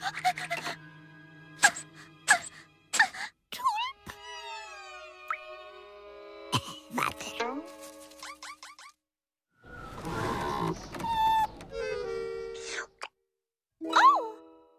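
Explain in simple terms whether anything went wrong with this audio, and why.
Nothing went wrong; no faults can be heard anywhere.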